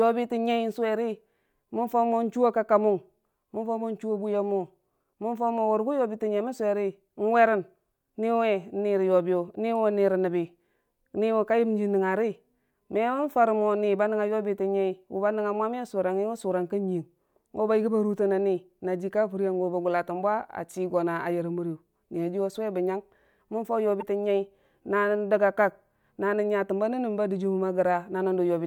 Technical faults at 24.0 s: broken MP3 bit reservoir

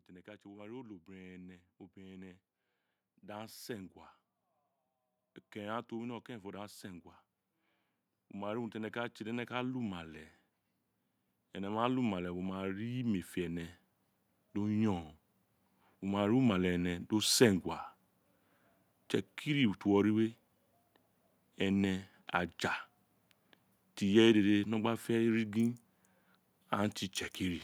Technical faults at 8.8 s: automatic gain rising

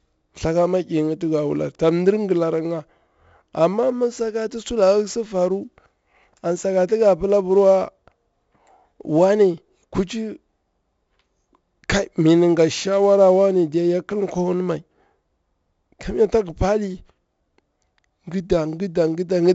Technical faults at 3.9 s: 4-bit ADPCM compression

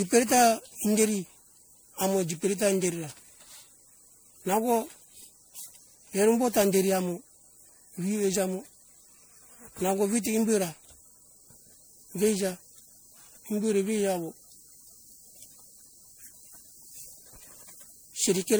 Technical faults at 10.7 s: generation loss

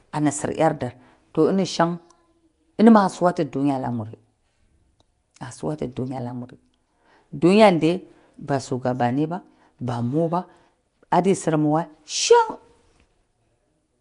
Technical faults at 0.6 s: Nellymoser compression

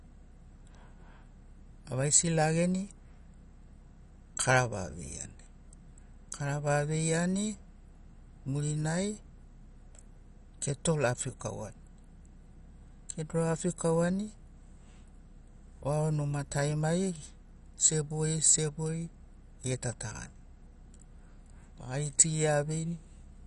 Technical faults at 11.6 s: MP2 compression

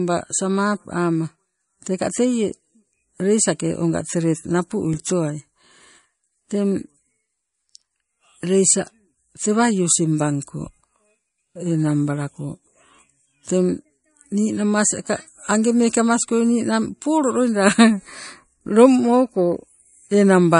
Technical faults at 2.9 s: MP3 compression

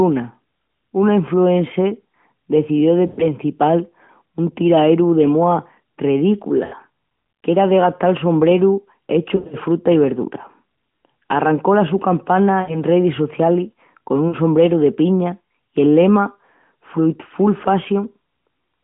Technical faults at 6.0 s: none

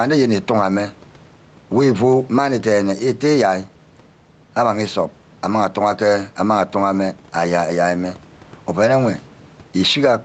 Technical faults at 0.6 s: gain pumping

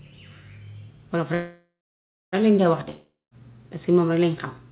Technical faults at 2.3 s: call audio freeze

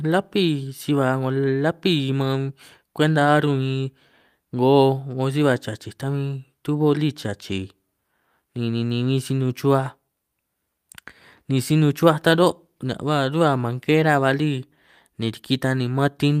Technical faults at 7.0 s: none

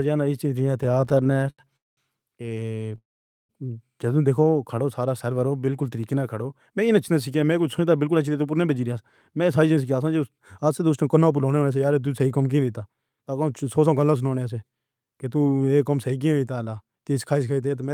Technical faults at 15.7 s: none

